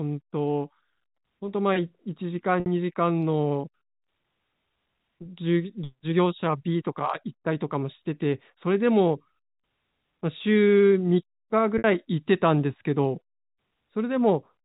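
At 2.6 s and again at 11.78 s there's packet loss with pitch repetition: about 60 ms drops out each time, consistent with three 20 ms packets, and the receiver loops the last pitch period to fill it, fading into a brief buzzy hold over the band-limited telephone sound.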